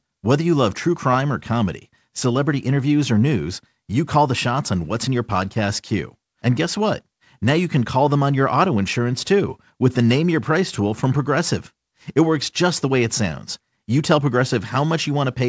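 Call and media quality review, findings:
No faults found in this speech recording. The WebRTC call path with the G.722 codec at 64 kbps is working as expected, with its wideband limit leaving nothing above 8 kHz.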